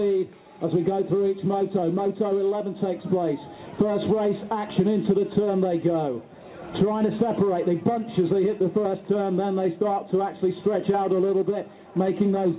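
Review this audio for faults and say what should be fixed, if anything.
No faults come through in this recording, so nothing needs fixing. It has passed through a call codec that fits G.711 mu-law at 64 kbps, which leaves the sound band-limited with nothing above 4 kHz, as expected for that path.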